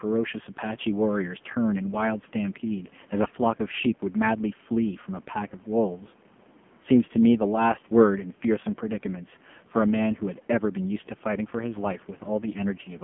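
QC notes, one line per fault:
Throughout: AMR narrowband mobile codec, heavily compressed at 5.9 kbps, band held to 150 Hz–3.4 kHz, giving buzzy synthetic speech, unlike plain band-limiting, which stays clean.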